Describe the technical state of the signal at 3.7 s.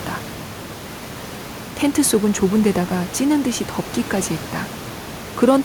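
At 3.7 s the signal is intact, with only the room's own background noise audible about 16 dB below the speech.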